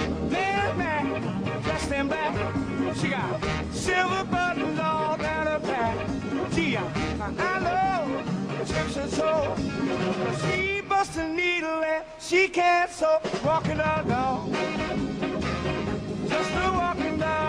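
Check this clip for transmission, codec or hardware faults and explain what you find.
No faults detected.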